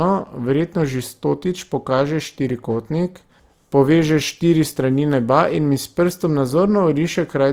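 Opus compression damage runs throughout the speech, from start to end. The sound is grainy and rough rather than swirly: upper harmonics turn noisy, and the voice has a coarse, fizzy texture. The full bandwidth is kept, so the muffling of the speech mode is absent. This is likely the music (CELT) mode short of bits, keeping each band's energy but filling detail with folded or noise content, which fits a low rate near 24 kbps.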